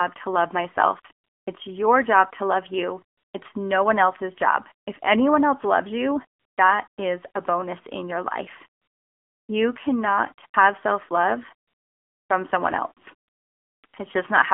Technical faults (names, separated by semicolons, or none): AMR narrowband mobile codec; AMR comfort noise